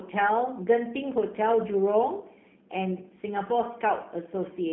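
From start to end, the speech carries plainly audible G.729 codec damage. Nothing passes above 3.7 kHz. The rough, synthetic texture fits an 8 kbit/s pulse-coded rebuild.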